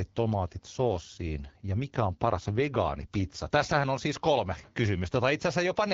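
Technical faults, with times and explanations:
0.47–3.86 s: AMR rate drop. The speech turns rougher and more synthetic with no gap or band change, which fits the codec stepping down from 12.65 to 8.85 kbit/s.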